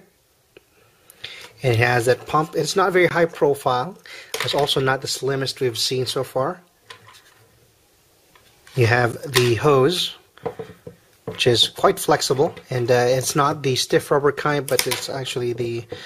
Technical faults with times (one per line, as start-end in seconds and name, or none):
3.09-3.11 gap between stream segments
9.12 gap between stream segments
15.12 gap between stream segments